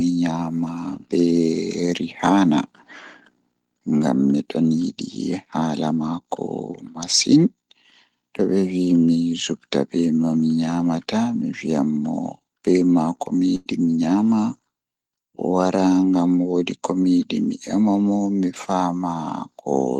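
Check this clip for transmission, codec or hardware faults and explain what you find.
One transmission fault stands out: a burst of packet loss at 13.55 to 13.72 s. Roughly 100 ms of speech never arrived, and the receiver covered the gap for about 104 ms by extending the last received sound while fading it down. This is heard as a brief held buzz or hiss, then speech picks up further along with a piece skipped. A spectrogram shows the last sound smeared and decaying into the gap and an abrupt restart, while the waveform shows a shrinking stretch before normal amplitude returns.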